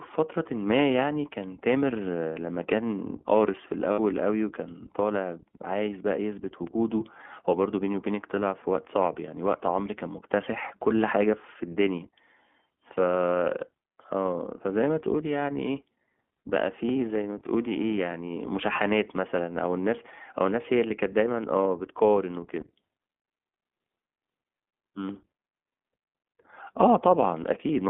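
The whole recording runs through the iLBC codec, and you can hear it straight away. The speech is squeezed into a narrow telephone band, roughly 200 Hz to 3.4 kHz, so there's no air or sparkle up top and a thin bottom end. The damage is plainly audible as a rough, slightly synthetic texture. iLBC codes each frame's excitation on its own, and the character here fits its 20 ms frame, 15.2 kbps mode.

Then there are three spots of lost iLBC frames. The first runs from about 3.92 to 4.00 s, roughly 60 ms of missing audio. There's a shorter one at 18.29 s, and another around 22.60 to 22.65 s, each about a single 20 ms frame. In each gap the decoder fills in by repeating the last pitch cycle with some noise mixed in, so you get a brief held, buzzy vowel. Because iLBC frames don't depend on each other, the speech snaps right back afterwards.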